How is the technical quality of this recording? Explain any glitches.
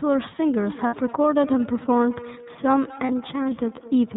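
The recording has clear technical faults: a narrowband, codec-coloured sound throughout, an echo loop for most of its length, and two brief dropouts.

Throughout, the speech sounds muffled, slightly rough and synthetic, with plainly audible coding damage and nothing above 4 kHz. This is the iLBC codec. It codes each frame's excitation independently, and the sound points to 30 ms frames at about 13.3 kbps.

From 0.58 s to the end, each stretch of speech returns at a steady interval of roughly a fifth of a second, thinner and more ringing each time, peaking about 18 dB below the speech. This is feedback echo between two devices. One device replays what the other's microphone sent, and that microphone picks it up again. Neither echo canceller removes sound played by the other device.

At 0.87 to 0.94 s (60 ms) and 3.06 to 3.10 s (30 ms), the speech briefly becomes a held, buzzy, breathy vowel. 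These are lost iLBC frames, consistent with two frames and one frame missing. The decoder repeated the last pitch cycle mixed with noise to fill each gap, and the voice recovers almost immediately afterwards.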